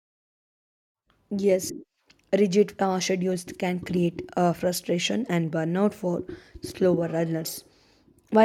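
At 1.68 s the speech is interrupted by a very brief burst from damaged data in a compressed stream. Part of the encoded file is wrong, so the decoder misreads the affected frame, loses its place and has to hunt for the next valid frame header. The result is a short chirp or blip lasting about 16 ms. A spectrogram shows it as a thin vertical smear of broadband energy, and a waveform shows an abrupt discontinuity.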